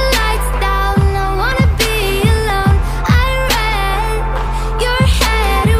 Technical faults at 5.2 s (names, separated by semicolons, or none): none